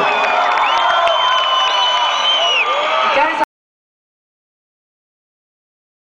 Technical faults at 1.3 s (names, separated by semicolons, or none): none